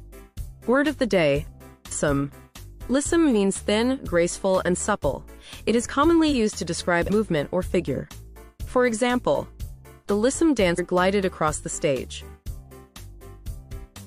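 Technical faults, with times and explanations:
1.91 s, 7.08–7.10 s and 10.78 s, damaged data in a compressed stream: each is a brief glitch of about 20 ms or less, a sudden foreign blip cutting into the sound. Bytes in the compressed stream were lost or corrupted at these points, so the decoder misread or discarded the affected frames and lost sync. It produced garbled output until it found the next valid frame header, leaving these short, unnatural bursts.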